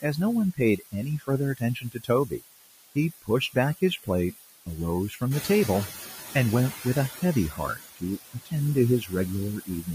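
Throughout the speech, low bit depth with dither (5 bits) lays a constant, even hiss roughly ten dB under the voice. Because the hiss stays steady and undistorted, it is unlike gritty quantisation distortion.

Noise suppressor artifacts run across the whole clip too. The background is lowered band by band, frame by frame, so it sinks between the words and rises under them, unlike the static dither hiss.

Speech cut by the noise suppressor first appears from 0.52 to 4.78 s. Over about two seconds of that span, soft sounds and word endings are pulled down by up to about 20 dB, sounding swallowed rather than masked by noise. The same fault returns at 5.09–5.49 s (about 12 dB), 5.86–6.35 s (about 11 dB), 6.72–8.53 s (about 19 dB), 9.0–9.13 s (about 12 dB) and 9.6–9.88 s (about 16 dB).

Around 5.5 s the room noise jumps by about 23 dB, settling some 11 dB below the speech. This produces noise suppressor catching up from 5.3 to 7.11 s. 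The louder background first passes through with less reduction, then sinks by about 13 dB over 1.81 s as the noise estimate adapts. This slow fade of the noise itself, not of speech parts, sets it apart from the speech cuts.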